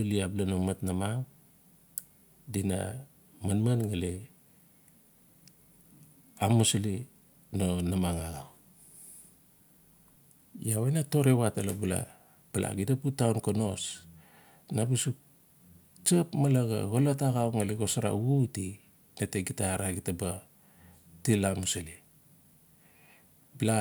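Listening to the speech recording revealed nothing that stood out as a technical problem.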